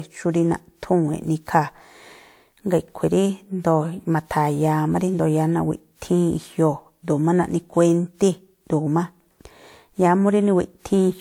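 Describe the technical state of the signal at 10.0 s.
At 10.0 s the speech carries generation loss, present across the whole clip: a swirly, hollow smear with blurred attacks, likely from about five passes of WMA encoding at a rate that fits 128 kbit/s. On a spectrogram, the content stops near 20.1 kHz.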